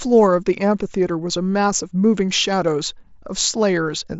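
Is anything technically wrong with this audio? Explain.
No, nothing is technically wrong with this audio.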